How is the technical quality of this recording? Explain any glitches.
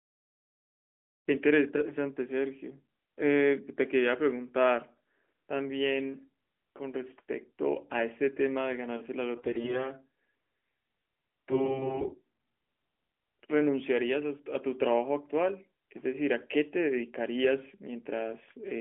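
The recording is narrowband mobile speech, confined to about 250 Hz to 3.4 kHz with light coding colour that fits AMR-NB at 12.2 kbps. It has two short bursts of AMR bit errors, at 9.36 to 9.89 s and 11.48 to 12.15 s. On a weak radio link, less protected bits in the codec frames arrived flipped while the check on the vital bits still passed. The decoder therefore placed its excitation pulses wrongly and used slightly wrong pitch, gain and spectral values. The voice keeps its pitch and loudness but turns hoarse, scratchy and gargly. The first burst is rougher, with around one bit in ten corrupted, against a little fewer in the second. Unlike lost-frame concealment, nothing drops out, repeats or fades.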